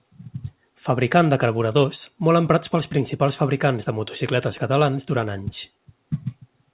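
No technical faults are audible.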